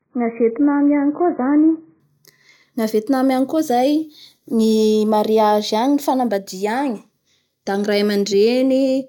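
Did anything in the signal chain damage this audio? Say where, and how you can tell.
Yes, at the playback end: this is an adaptive stream starting at a low bitrate. For the first 2.0 s the speech has nothing above about 2.5 kHz and smeary codec artefacts, which fits a very low-bitrate AAC rendition, then quality jumps up abruptly with no gap.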